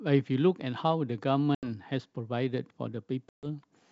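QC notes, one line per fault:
1.55–1.70 s and 3.29–3.46 s, packet loss on an ADPCM call: two hard-edged silent holes, about 80 ms and then 140 ms long. Lost packets leave the decoder's predictor and step size out of step with the sender. Each return comes back with brief distortion, settling over tens of milliseconds against the clear wideband G.722 background.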